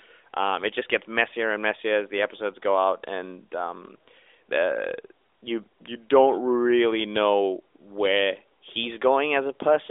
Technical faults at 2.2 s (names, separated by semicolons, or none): none